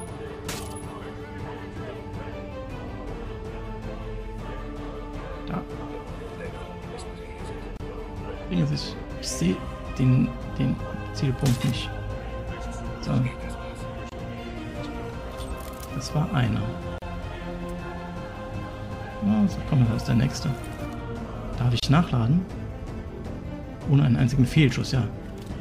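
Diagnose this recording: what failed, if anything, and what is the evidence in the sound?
Four codec-stage gaps at a join of encoded pieces: silences of 28 ms at 7.77 s, 26 ms at 14.09 s, 36 ms at 16.98 s and 30 ms at 21.80 s. Each joined piece kept its encoder delay and padding, leaving flat waveform dropouts and blank spectrogram columns with smeared edges.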